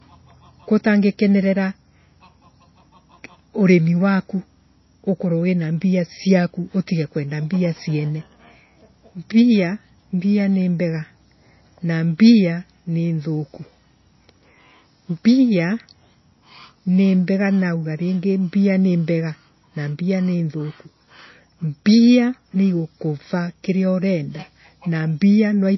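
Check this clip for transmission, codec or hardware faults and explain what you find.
One codec fault runs through the whole recording: low-bitrate audio saved at a high bitrate. The speech has nothing above 5.8 kHz, and that dull, band-limited quality, along with the swirly artefacts of a starved encoder, fits a low-rate MP3 pass at around 24 kbit/s that was likely re-encoded later as a high-rate MP3 near 320 kbit/s. The second encode keeps what survived but cannot rebuild the discarded high band or smooth the earlier artefacts.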